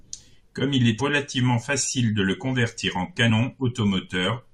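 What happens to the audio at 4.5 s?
At 4.5 s the speech runs through intact, with no dropout, click, distortion or other fault at that point.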